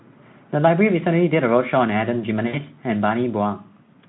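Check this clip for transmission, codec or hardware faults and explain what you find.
One transmission fault stands out in this speech, which comes through a narrow Speex telephone band of about 150 Hz to 3.6 kHz. VoIP packet loss concealed by the speech codec, 2.47 to 2.57 s: roughly 60 ms of packets vanished, and the decoder extended its last pitch and filter at falling gain, smearing the sound into a fading buzzy tone or coloured noise.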